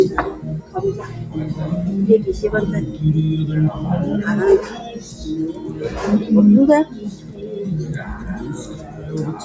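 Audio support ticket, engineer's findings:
Noise suppressor applied to music or sounds, whole clip: speech-tuned suppressor treating steady tones and tails as noise. Gain swings about 10 dB, so the waveform envelope pumps and the spectrogram's sustained bands flicker.

Sound cut by the noise suppressor at 4.77–5.23 s (about 7 dB), 6.85–7.56 s (about 9 dB), 7.99–8.35 s (about 6 dB), and 8.54–9.12 s (about 7 dB). Held material is pulled down, leaving visible waveform dips and faded spectrogram energy. Call mic path bandlimited, nothing above 8 kHz.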